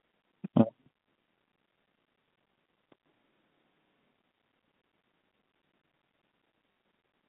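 At 0.84 to 0.86 s and again at 2.48 to 2.50 s there is packet loss with the last packet repeated. A 20 ms gap, consistent with one packet, is filled by replaying the previous chunk. On the waveform you see a short copied segment with abrupt edges.

From 3.06 to 4.13 s the speech turns roomy and hollow with thinner bass, but its level barely changes. Room noise rises to around 30 dB below the speech. This is likely a switch to a distant microphone. The spectrogram shows the low end dropping away and a lifted noise floor between syllables. The cut in and out is sudden, with vertical edges.

At 6.72 to 6.76 s a 40 ms loss, pointing to two packets, is patched the same way. The repeated segment buzzes at about 50 Hz, which on the spectrogram shows as evenly spaced vertical striations, all within the 150 Hz to 3.6 kHz telephone band of the G.711 line.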